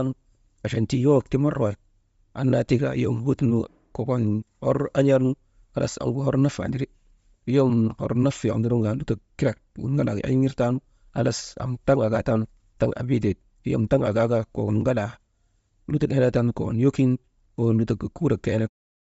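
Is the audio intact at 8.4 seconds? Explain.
No. Speech at 8.4 s carries plainly audible Bluetooth LC3 compression across the whole clip, likely at 32 kbps with 10 ms frames. The breathy, grainy upper band shows on a spectrogram as noise-filled high-frequency blocks.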